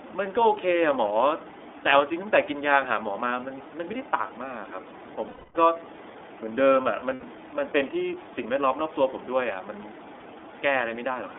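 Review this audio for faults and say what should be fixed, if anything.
iLBC codec coding runs through the whole clip. The speech is confined to a narrow band of roughly 300 Hz to 3.6 kHz, and each short block is coded on its own, which leaves a plainly audible rough, synthetic edge. The texture fits iLBC's 30 ms, 13.33 kbps mode. Preventing this means sending the call over a wideband codec such as Opus or G.722 instead of iLBC.

Lost iLBC frames occur from 5.27 to 5.56 s and from 7.14 to 7.24 s. The decoder fills each gap by repeating the last pitch cycle blended with noise, so the sound turns into a held, buzzy vowel. The first gap lasts 270 ms and fades as it goes on. The second lasts 90 ms. Normal speech resumes almost immediately because every frame decodes independently. Preventing this means reducing packet loss on the network path, or adding forward error correction and a suitably sized jitter buffer.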